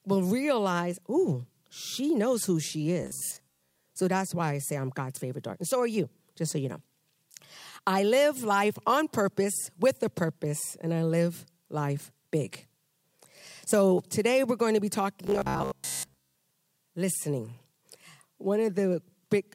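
Robotic sound from repeated short buffers appears at 3.03 to 3.85 s and again at 15.27 to 16.39 s. The speech turns into a rigid metallic buzz near 67 Hz. That likely comes from roughly 15 ms snippets being replayed while most new audio is skipped.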